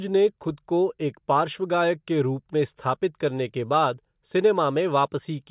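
Across the whole of this speech recording the signal holds steady, with no audible technical faults anywhere in it.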